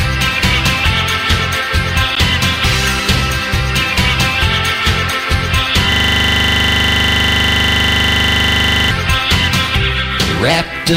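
A gap between stream segments at 2.15 s leaves a hard-edged hole of about 12 ms. The time stamps of two adjoining segments don't meet, so the player fills the space with silence. The sound cuts out abruptly and resumes without losing any audio.

A system hang loop runs from 5.92 to 8.91 s. The computer or driver froze while the sound hardware kept replaying its ring buffer, so one 40 ms slice of audio repeats exactly, 75 times over, producing a steady buzz at 25 Hz.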